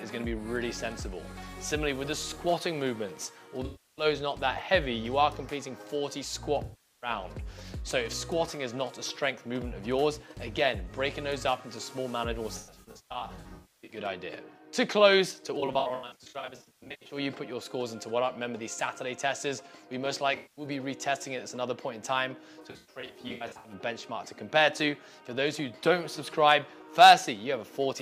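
AAC frame loss with concealment at 3.65–4.05, 6.64–7.10, 12.57–13.97, 15.60–17.17, 20.36–20.66 and 22.62–23.73 s. Each time, the decoder rebuilt the missing frames from the last good spectrum, which leaves smeared, noisy patches. The isolated gaps last 0.2 to 0.4 s, while the longer spans hold scattered bursts, the longest around 300 ms.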